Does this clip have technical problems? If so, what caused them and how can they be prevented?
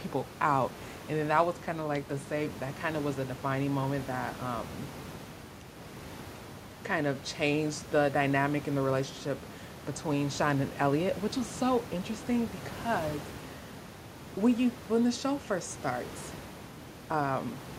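No, this clip has no technical problems, so there is nothing that needs preventing.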